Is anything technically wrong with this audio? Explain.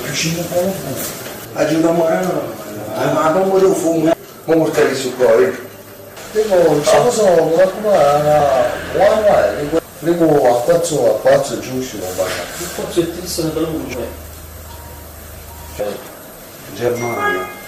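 Yes. Compressed frames are skipped at 8.40, 12.02, 13.94 and 16.88 s. Whole 32 ms frames go missing or get rejected by the decoder, so the audio jumps ahead by roughly a tenth, a fifth, nearly a third, and a few hundredths of a second. A waveform shows an abrupt envelope change, and a spectrogram shows a sudden discontinuity in its patterns.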